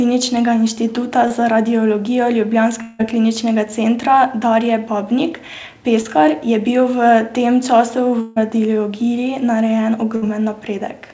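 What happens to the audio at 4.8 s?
At 4.8 s the speech carries on intact, with no dropout, glitch or distortion, only the steady band limit of the call path with nothing above 8 kHz.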